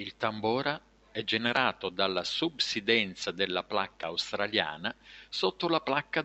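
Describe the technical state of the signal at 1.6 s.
At 1.6 s the signal is intact, with only a faint room noise sitting about 37 dB below the speech.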